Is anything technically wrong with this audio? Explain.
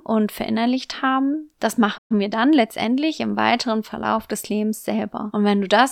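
Yes, the speech has two linked playback faults.

Playback stall, 1.97 to 2.12 s: right after "verinnerlicht haben das" the output drops to silence for about 120 ms. The likely cause is that the player ran dry of buffered data or its audio thread was held up, so nothing reached the output until it recovered. The speech breaks off abruptly in mid-flow, leaving a short but clearly audible hole, then resumes.

Time-compressed catch-up, 2.12 to 2.92 s: once playback returns, the player works off its backlog by cutting out small slices of audio and cross-fading the joins, running about 1.15 times normal speed while keeping the original pitch. For this stretch leading up to "im weiteren", the speech sounds hurried.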